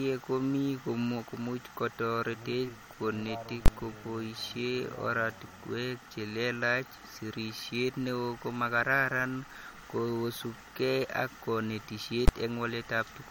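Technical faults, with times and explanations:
Throughout: MP3 compression, likely at a low bitrate near 48 kbps; nothing above 18.6 kHz survives, and weak frequency lines flicker frame to frame, giving plainly audible watery smearing.
3.66 to 3.68 s: invalid numbers at full scale; for about 21 ms, fitting a 1024-sample block, output sits flat at one extreme value, heard as loud pops bracketing silence.
12.28 s: invalid numbers at full scale; a shorter 11 ms block, fitting 512 samples, jumps to one extreme value and collapses into a single loud bang.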